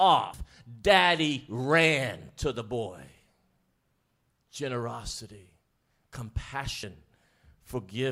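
At 0.34 s, just before "daddy ran to the", compressed frames are skipped. The speech jumps forward by roughly 150 ms, which fits about four frames of 32 ms that were either missing or rejected by the decoder as damaged. At 6.83 s the same fault recurs with a shorter jump of roughly 70 ms, about two frames.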